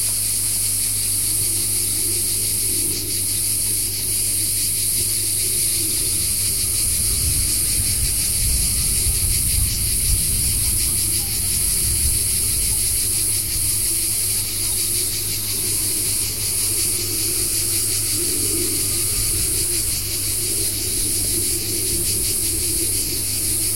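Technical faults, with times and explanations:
Throughout, mains hum: a ground loop or stray field from a nearby transformer is coupling the 50 Hz power line into the signal path, leaving a steady low drone with a few low harmonics under the sounds, sitting roughly 15 dB below them.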